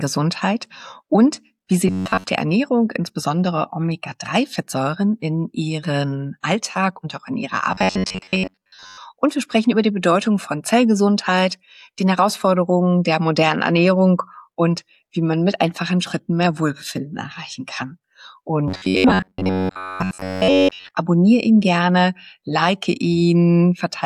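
Three stretches of the audio, at 1.88 to 2.25 s, 7.72 to 8.98 s and 18.68 to 20.95 s, turn into a stiff metallic buzz locked at 93.8 Hz. This is robotic sound from repeated short buffers, likely from input arriving late so that a chunk of about 10.7 ms is replayed over and over, covering most of each stretch. Unlike gaps or stutter, nothing goes silent, and the fixed buzz pitch separates it from codec warble.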